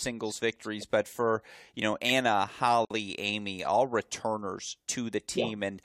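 At 2.85 to 2.90 s, a gap at a join of encoded pieces appears. Separately encoded pieces were spliced untrimmed. About 54 ms of silence cuts in, with smeared edges.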